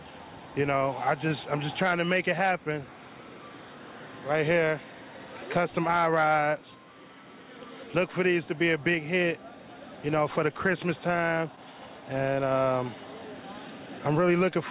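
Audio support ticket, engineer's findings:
No audio faults found; nothing to report for this ticket.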